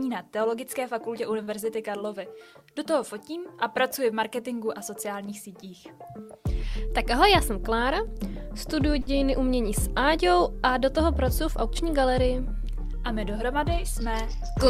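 Two short stalls from late packets show up in this audio, at 1.43 to 1.49 s and again at 9.01 to 9.09 s. Each time the next packet hadn't arrived, the jitter buffer ran dry, and the receiver held the last bit of sound for about 38 ms the first time and 57 ms the second. Playback then picked up right where it left off, so nothing's actually missing. You just hear a sound drawn out a touch too long, with a faint buzz or dip, and the delay grows by that amount. In between, from 7.02 to 8.76 s, there's a jitter buffer speed-up. The buffer had more queued than it wanted, so the receiver kept snipping out tiny pitch-period-sized chunks to catch up. That stretch runs at about 103% speed with the pitch unchanged, trimming roughly 50 ms of backlog overall.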